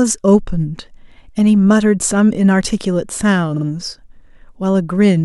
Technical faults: repeated frames

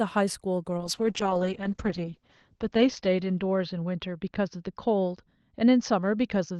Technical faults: call bitrate drop

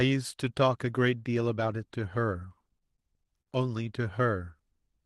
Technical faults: repeated stalls (stutter)

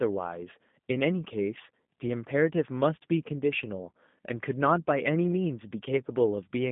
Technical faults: G.729 codec

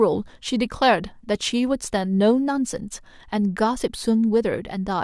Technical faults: none

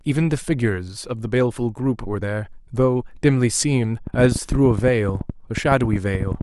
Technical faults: train of clicks

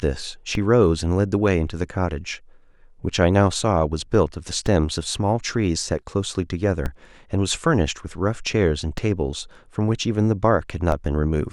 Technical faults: DC step

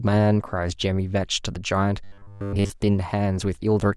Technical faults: robotic sound from repeated short buffers

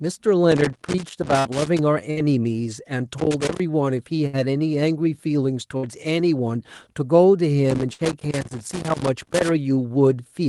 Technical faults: loose connector crackle; burst of packet loss

